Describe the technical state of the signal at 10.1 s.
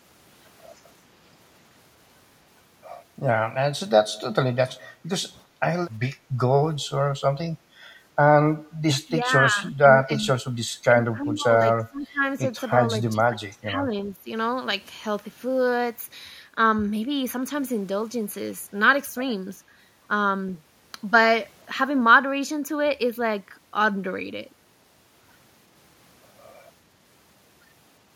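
At 10.1 s the speech is being suppressed in double talk, within a span from 9.22 to 10.27 s. The level dips by up to about 10 dB, for around 0.7 s in total. An echo canceller likely mistook overlapping talk for echo and attenuated it.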